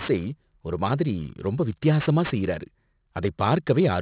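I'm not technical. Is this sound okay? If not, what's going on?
No. Aliasing runs through the whole recording. It sounds like the speech was converted to a much lower sample rate, likely around 8 kHz, without first removing the high frequencies. Hiss-like sounds such as s and sh should sit above 4 kHz. Instead they fold back below that point as false, unrelated tones, so they come out gritty and metallic. The added grit is quieter than the speech itself.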